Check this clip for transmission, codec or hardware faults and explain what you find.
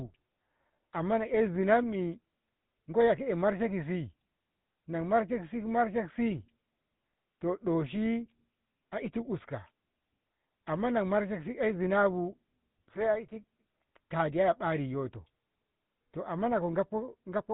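There's one fault, and it runs the whole way through: GSM full-rate coding. The codec models the vocal tract, drives it with sparse regular pulses and cuts everything above 4 kHz, which fits the old 13 kbps full-rate codec. The speech comes out plainly buzzy and gravelly.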